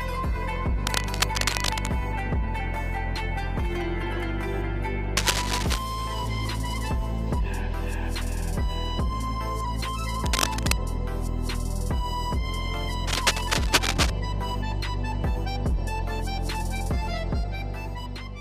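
Cable scratch noise at 0.87–1.87 s, 5.17–5.79 s, 10.26–10.72 s and 13.07–14.10 s: dense, uneven rustling bursts roughly as loud as the sound itself, likely from a worn connector whose contact resistance fluctuates as it moves.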